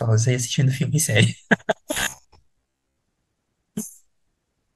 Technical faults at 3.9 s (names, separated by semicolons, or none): none